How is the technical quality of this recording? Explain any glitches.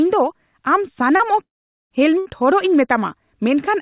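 The recording has three network glitches close together. It passes through a call link with nothing above 4 kHz, which points to a narrowband codec such as G.711 at 64 kbps.

Short concealed packet loss, 1.16 to 1.22 s. About 40 ms of audio reached the decoder too late. The receiver continued the preceding sound for about 34 ms, then blended back into the real signal. It is heard as a brief smear or wobble.

Long network dropout, 1.43 to 1.93 s. The sound stretches into a fading buzz or hiss, then drops to silence for about 0.46 s. The audio returns further on, with roughly half a second gone. The likely cause is that no packets arrived during that stretch.

Burst of packet loss, 2.18 to 2.28 s. About 80 ms of consecutive audio went missing. The receiver held the last sound for about 70 ms and turned it down as the gap went on. This gives a short fading buzz or hiss, and the audio then resumes past the gap.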